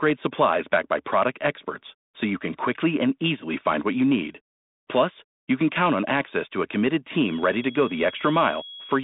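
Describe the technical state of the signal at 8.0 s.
A feedback whistle, a thin steady tone near 3.3 kHz, runs from 7.04 s after "access to a committed" to the end, well below the speech, likely from a loudspeaker-to-microphone loop held just short of runaway, so it never swells into a howl.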